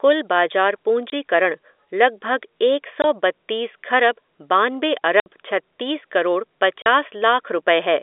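Speech over a telephone-band line has packet loss filled with silence: hard-edged dropouts at 1.10–1.12, 3.02–3.04, 5.20–5.26 and 6.82–6.86 s, lasting 20 to 60 ms, which fits whole 20 ms packets. Unlike concealed loss, the gaps are true silence, not smeared or repeated sound.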